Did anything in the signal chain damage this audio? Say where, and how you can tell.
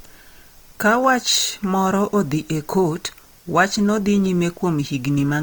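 Yes, at the codec stage. Across the whole clip the speech sounds grainy and rough, with noisy texture where tones should be clean, yet the top end still reaches about 20.2 kHz. That points to Opus compression, likely in its CELT music mode at a rate around 24 kbps, filling starved bands with folded or noise content.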